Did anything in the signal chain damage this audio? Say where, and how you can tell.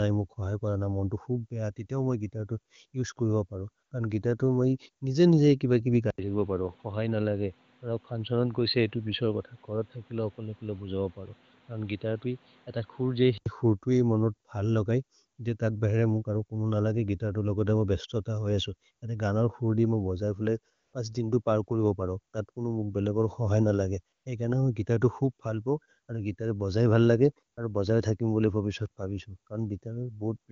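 Yes. Steady, smooth synthetic noise replaces the real background in brief gaps at 3.85–3.91 s, 20.73–20.93 s, 24.15–24.25 s and 27.53–27.57 s. This is AMR comfort noise from the call's silence detection pausing speech frames.

From 6.10 to 13.46 s the sound turns dull and boxy, with nothing above 4.6 kHz, an 80 ms dropout at the switch, faint new background noise, and little level change. The input likely switched to a poorer device.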